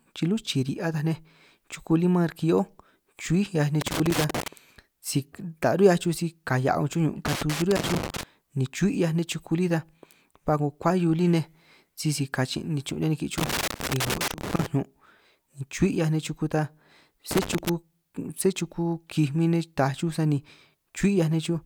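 Irregular bursts of crackle and scratching break into the speech at 3.81–4.48 s, 7.26–8.23 s, 13.38–14.66 s and 17.31–17.69 s. This is loose connector crackle: a worn or dirty contact repeatedly makes and breaks as it shifts, chopping the signal.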